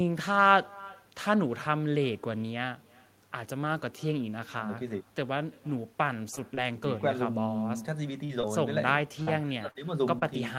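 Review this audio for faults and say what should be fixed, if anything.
Echo with no canceller runs throughout: a faint copy of the speech, about 26 dB down, returns roughly a third of a second later. It is a delayed repeat, not a smear on the original.

Lost packets rebuilt from error correction appear as 20 ms rough, noisier patches at 6.29, 6.37, 6.57, 6.61 and 7.05 s. They leave no gap, unlike concealment.

Short concealed packet loss occurs at 6.35 to 6.39 s and 6.55 to 6.59 s. Each missing 20 ms is filled by continuing the last sound, giving a brief smear rather than a rough copy.

Repeated packet loss (robotic sound) runs from 8.25 to 10.23 s. Five gaps, the longest 42 ms, are patched by concealment and error correction, making the speech choppy rather than briefly blurred.

Enable echo cancellation at the far end and fix the network path's loss and jitter, with a deeper jitter buffer if needed.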